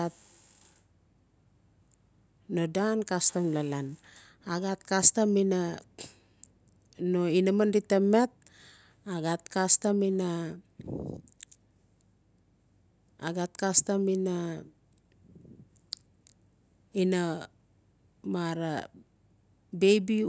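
Nothing in this speech recording stood out as a technical problem on listening.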